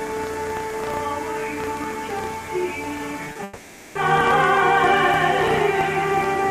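From 3.27 to 3.39 s the audio turns choppy, with pieces missing, the sign of repeated packet loss. Four short holes, none longer than 30 ms, fall in quick succession, and each is patched by stretching the preceding sound, so about half of that 0.12 s span, some 60 ms, is synthetic fill. Because the gaps are brief and interleaved with real audio, this sounds like stuttering rather than a full break.

Just after, from 3.43 to 3.96 s, the sound freezes into a smeared, continuing drone for roughly half a second before normal audio resumes with that stretch missing. This is likely a long network dropout: nothing arrived for about 520 ms, and the receiver continued the last sound as a fading buzz throughout, never reaching silence. Unlike the earlier patch, it is one unbroken replacement with no genuine audio mixed in.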